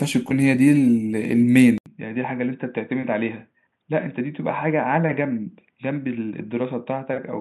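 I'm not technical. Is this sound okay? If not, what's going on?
No. At 1.78 seconds there is a tiny gap. Then the speech turns dull, boxy and a bit quieter until the end. Nothing above 3.8 kHz gets through, and faint new background noise appears. The likely cause is an input switched to a poorer device.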